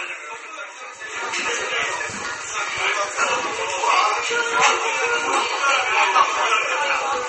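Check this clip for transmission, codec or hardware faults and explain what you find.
One fault is present: heavy MP3 compression, running through the whole clip. Nothing reaches above 8.3 kHz. The cause is likely a starved encoder, which fits about 32 kbps. It cut the treble flat and dropped weak frequency lines frame by frame. The result sounds watery and swirly, with smeared attacks.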